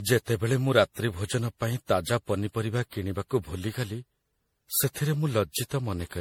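Repeated lossy coding, likely MP3 re-encoded around seven times at a rate that fits 64 kbit/s, runs through the whole of this speech clip, a textbook case of generation loss. Each decode and re-encode pass lands on a shifted frame grid and quantises again, so errors pile up: the speech takes on a swirling, hollow, smeared quality beyond what one pass at that rate would leave, consonant attacks blur, and nothing remains above 19.6 kHz.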